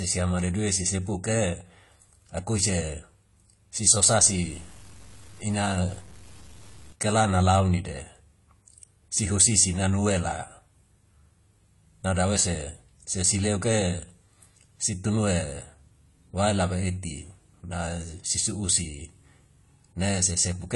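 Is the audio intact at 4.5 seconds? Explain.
No. Low bit depth without dither runs from 4.09 to 6.93 s, likely truncation to about 8 bits, leaving signal-dependent grain roughly 25 dB below the sound. AAC compression is also present: nothing above 11.4 kHz, with a dull, smeared texture that likely points to AAC-LC at around 32 kbps.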